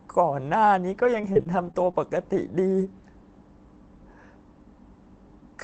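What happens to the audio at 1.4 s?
At 1.4 s you're in the middle of a patch of scattered short gaps running from about 0.97 to 2.43 s. A handful of packets went missing, each hole no longer than about 20 ms, and the receiver papered over them by stretching the last bit of sound, so you get brief ticks and little smeared hiccups in the speech.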